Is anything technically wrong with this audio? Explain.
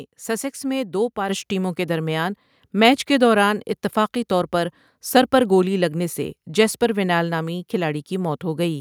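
Yes. At 1.29 s the microphone volume stepped up by about 7 dB in one jump, as software raised the input gain, lifting speech and background together.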